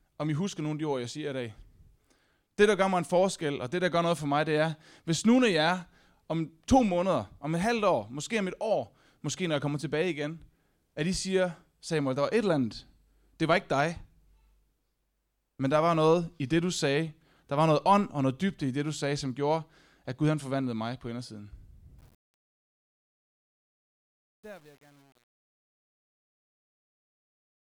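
From 21.99 s to the end at 27.65 s, the speech fade-out suffers truncation distortion. The fade itself starts around 22 s, but the gain stage drops fine resolution without dither, so the waveform collapses into coarse steps, which fits roughly 9-bit precision. From 22.52 s onward the tail turns gritty. Unlike noise-gate chatter, the grain gets worse steadily as the level falls, not at a threshold.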